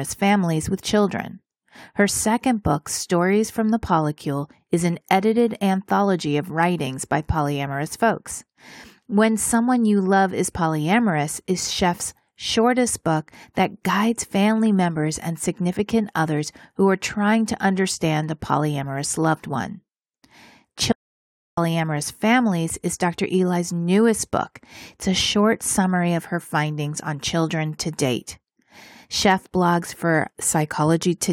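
Clock slip clicks run from 0.11 s to 31.25 s, a faint tick roughly every 0.15 s, about two hundred in all. Each is likely one sample dropped or repeated as two unsynchronised clocks drift apart, by an error of around 150 ppm.

An audio dropout to silence cuts the speech from 20.92 s to 21.57 s, about 0.65 s of silence with no room tone. The likely cause is a lost input while recording continued, writing zeros in its place.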